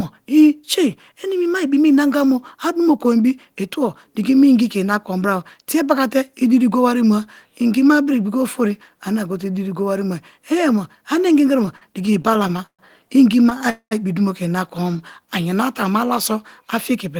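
This speech clip has repeated stalls, or stutter, from 11.63 to 12.81 s. Thirteen brief gaps are bridged by continuing the last sound, the longest 125 ms. About a quarter of that span is filler, so the speech drags. Nothing is lost. Late or slow packets kept draining the jitter buffer. A shorter burst of stutter follows from 13.45 to 13.62 s, with four tiny gaps of up to 13 ms, just before "a ibi dumo ke". A call audio freeze runs from 13.70 to 13.93 s, ending just before "ibi dumo ke ina". The sound stretches out and fades into about 90 ms of silence, adding 212 ms of delay. The likely cause is packets held up in transit until the buffer emptied. A jitter buffer slow-down runs from 14.84 to 15.27 s, between "ibi dumo ke ina" and "ayanara te a mu". Repeated pitch periods add about 56 ms and slow the speech to 89% speed at unchanged pitch. This lets the buffer rebuild its reserve.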